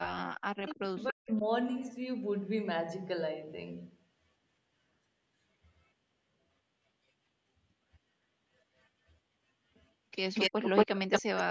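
From 0.07 to 1.44 s, speech suppressed in double talk, likely an echo canceller unable to tell its own talker from loudspeaker echo, ducks the speech by as much as about 40 dB in pieces totalling around a second. Inside that span, at 0.67 to 0.75 s, an echo leak sends back a scrap delayed by 280 ms, about 15 dB below the speech. From 10.34 to 11.43 s, a longer leak returns a 230 ms copy about 5 dB louder than the speech, while suppression cuts speech again for roughly 0.3 s between 10.5 and 10.97 s.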